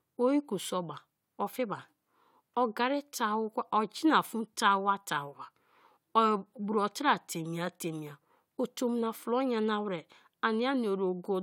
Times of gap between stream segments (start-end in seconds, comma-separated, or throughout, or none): none